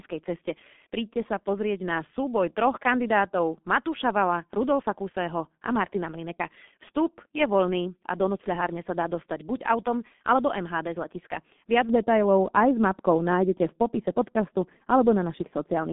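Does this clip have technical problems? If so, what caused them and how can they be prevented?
Yes. Throughout, the speech sounds muffled, hoarse and boxed-in, with smeared consonants and nothing above 3.8 kHz. This is the G.723.1 codec at about 6.3 kbit/s: 30 ms frames, a slowly updated voice model, and a 200 Hz to 3.6 kHz line band cause heavy damage. Prevent it by using a wideband modern codec such as Opus.

From 11.89 s, just after "z letiska", to the end, the sound turns duller still, sloping smoothly down toward the top. This is de-emphasis applied wrongly, a treble cut of about 11 dB at 10 kHz relative to 1 kHz. Prevent it by applying de-emphasis only once, and only to pre-emphasised signals.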